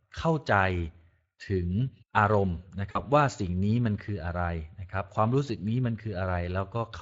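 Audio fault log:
throughout: Speex codec. CELP coding with too few excitation bits leaves the speech plainly hoarse and noisy, which fits roughly 20 kbps. The spectrogram shows smeared, grainy harmonics.
2.91 to 3.03 s: VoIP packet loss concealed by the speech codec. About 40 ms goes missing, which fits two lost frames. The decoder repeats its last pitch and filter, so the speech is stretched into a fading sound. The spectrogram shows a flat, repeated spectrum, and the waveform tapers in amplitude and stays weak briefly afterwards.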